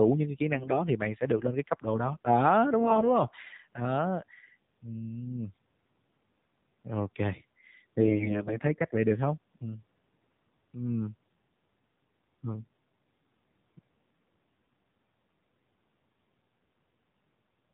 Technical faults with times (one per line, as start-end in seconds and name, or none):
0.00-17.73 AMR narrowband mobile codec
0.54-0.83 AMR bit errors
2.80-3.16 AMR bit errors
8.00-8.59 AMR bit errors